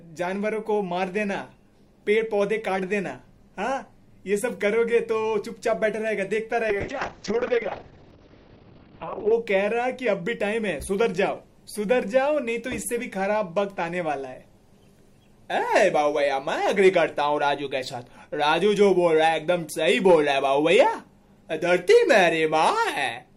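From 6.7 s to 9.38 s a call bitrate drop strips the top of the audio. The band closes from 20 kHz to about 6 kHz and the sound turns coarse and watery, which fits the encoder being pushed from 128 kbps down to around 7 kbps after the bandwidth estimate fell. It stays at its worst for about 2.6 s. Unlike packet loss, nothing drops out or stutters, and unlike a plain low-pass filter, the texture itself degrades.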